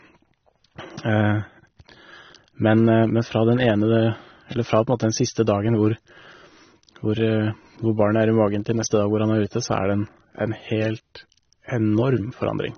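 Speech showing plainly audible AAC compression throughout: nothing above 6.3 kHz, with dull, smeared, warbling sibilants, likely AAC-LC at a low bitrate around 24 kbps.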